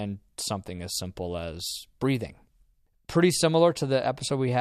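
No technical faults can be heard in this speech recording at any point.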